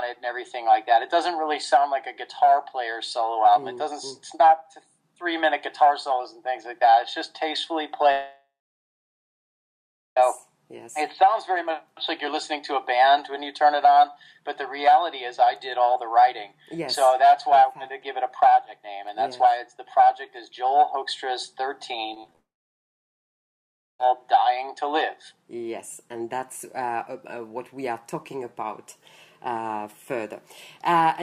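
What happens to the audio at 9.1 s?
At 9.1 s the audio is inside a long network dropout running from 8.11 to 10.17 s. The last sound is stretched into a short fading buzz, then about 1.7 s of silence follows, likely because packets stopped arriving. Playback resumes at 10.17 s with the missing stretch gone.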